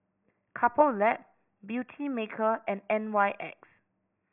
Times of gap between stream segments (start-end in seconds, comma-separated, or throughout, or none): none